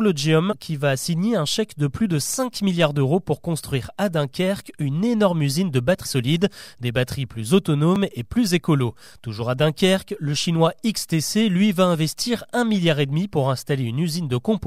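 At 0.51 to 0.53 s, just before "qui va signer un", compressed frames are skipped. About two frames of 26.1 ms go missing, so roughly 50 ms of speech is lost and the audio jumps forward. Overlapping neighbour frames blur the join into a short smeared blip rather than a click. On a spectrogram the harmonic lines break off and resume displaced, with a faint vertical smudge at the seam.

At 6.04 s, between "une énorme usine de" and "solides des batteries plus", the same fault returns. This time about three frames, roughly 70 ms, are skipped, and the blip is similar in character.

At 7.96 s, between "solides des batteries plus" and "et plus écolo", about 7 ms of audio is missing between chunks. The two sides are butted together with no gap, leaving a tiny skip. The waveform shows an abrupt step where the cycles don't line up, and a thin broadband vertical line appears on the spectrogram. Its timing fits a processor likely working in 4-second chunks.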